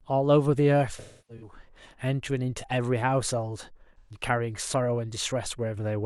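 AAC frame loss with concealment strikes twice in the speech. From 0.98 to 1.53 s, about 341 ms of coded audio went missing in gaps scattered over roughly 427 ms, the longest near a third of a second, so the decoder rebuilt sound from the last good spectrum and let it decay, leaving a smeared, hollow patch that thins toward silence before recovering. At 3.98 to 4.21 s a shorter 128 ms loss, fitting about three frames, leaves a brief noisy, phasey blur.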